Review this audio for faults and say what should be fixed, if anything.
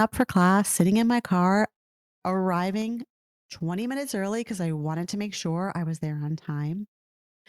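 From 0 to 0.83 s, before "in my car", the loudest syllables crackle harshly: likely microphone overload, with peaks about 6 dB past the converter's limit and a small fraction of samples flattened. Lower the input gain so peaks stay comfortably below full scale.

At 0.81 s, just before "in my car", voice and background suddenly drop by about 2 dB, likely the microphone volume stepped down by the call software reacting to that clipping. Set the input level correctly beforehand so the software never needs to cut it mid-call.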